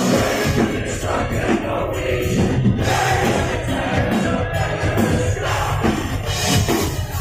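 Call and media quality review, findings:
No faults found: the signal is continuous, with no dropouts, distortion or timing irregularities.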